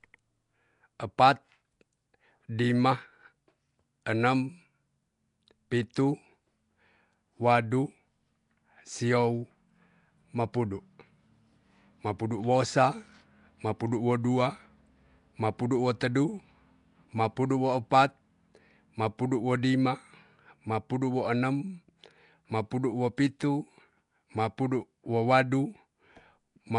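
A speech clip with a rough, hissy halo over the whole recording and a smeared, underwater quality. Nothing is heard above 10.6 kHz. The damage is plainly audible and likely comes from Nellymoser compression, which fits a low bitrate around 44 kbps. Bits are spread thin, so weak bands are dropped and filled with noise. At 23.17 s there is pre-echo. A brief hiss, about 11 ms long, leads into a sharp attack, which sounds soft. The codec spread its noise over the whole block, so it also filled the quiet moment before the attack.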